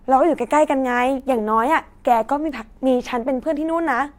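Single sharp ticks land at 1.20 s and 2.49 s, each peaking around -27 dBFS and spread across the spectrum with no link to the speech. These are bit error spikes: one flipped bit corrupts a single sample, which jumps by a power of two and snaps straight back.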